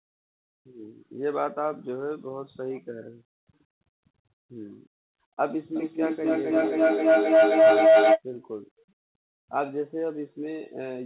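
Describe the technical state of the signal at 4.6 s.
At 4.6 s the speech is intact, with nothing wrong to be heard beyond the ordinary narrowband sound of a call path whose codec passes nothing above 4 kHz.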